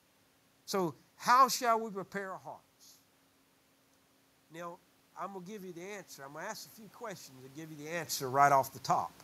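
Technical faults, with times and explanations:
Throughout: channel delay (comb filtering). One channel lags by a fraction of a millisecond before mono summing. Cancellation notches start near 3 kHz, so the speech sounds hollow and phasey.
4.49 to 8.49 s: automatic gain rising. The input fell by about 12 dB, so the gain control slowly raised level about 8 dB. Voice and room noise swell together.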